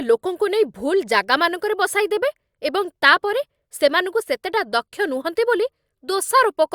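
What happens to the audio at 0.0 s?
At 0.0 s the audio is intact, with no dropout, click or distortion at that point.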